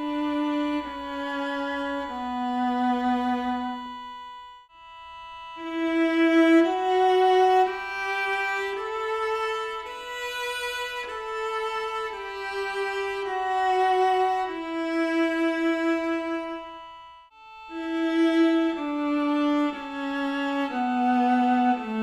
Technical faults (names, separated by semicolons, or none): none